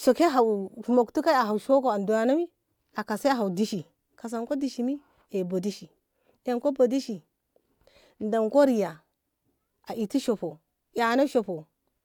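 No technical faults can be heard anywhere in this speech recording. It runs continuously with no dropouts, glitches or interruptions at any point.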